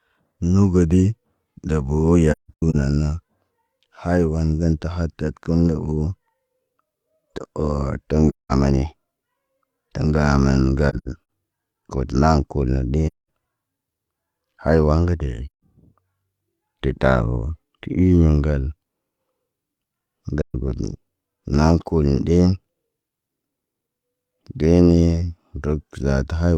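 AAC frame loss with muting recurs at 2.32–2.75, 8.29–8.52, 10.89–11.08, 13.07–13.28, 15.47–15.61 (right after "ga deʄi") and 20.42–20.55 s. Lost frames were decoded as a zeroed spectrum, so the speech fades out and back in through the overlapping windows, leaving soft-edged holes of about 130 to 300 ms. The first and third gaps are broken into scattered dropouts, with the longest stretch lasting about 150 ms.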